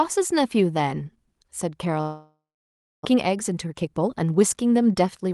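A long network dropout runs from 2.01 to 3.07 s in this speech recording. The sound stops, the last fragment is stretched into a fading buzz, and then about 0.64 s of near-silence follows. The likely cause is a stall in packet arrival, and roughly 0.6 s of audio never returns. A jitter buffer speed-up follows from 3.11 to 5.32 s, where the voice plays at about 116% pace with unchanged pitch and sounds hurried. The receiver repeatedly trims pitch-period-sized slices, removing roughly 0.4 s in total, to drain the backlog that built up after the outage. The Opus coding, which fits a 32 kbps call setting, leaves its usual coding noise, and the highs stop at 12 kHz.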